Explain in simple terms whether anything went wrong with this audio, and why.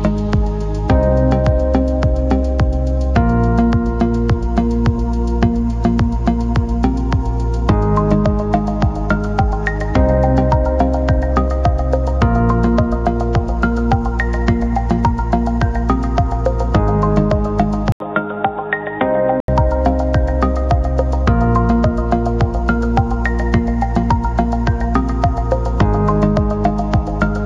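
At 17.92 s there's a brief 80 ms dropout, then the sound turns dull and boxy, a bit quieter, with nothing above 3.8 kHz, until it clears at 19.48 s. That's most likely an input switched to a poorer device: the recording briefly jumped to a weaker microphone.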